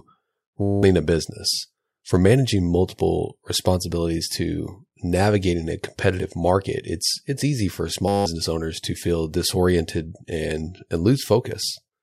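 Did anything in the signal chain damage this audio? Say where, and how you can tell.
Yes, a system hang loop at the driver or buffer stage: from 0.62 to 0.83 s, just before "a business", and 8.08 to 8.26 s, between "it's it's easy for" and "owners to feel disoriented". Each time a 10 ms slice repeats as a steady 100 Hz buzz, swallowing about a fifth of a second.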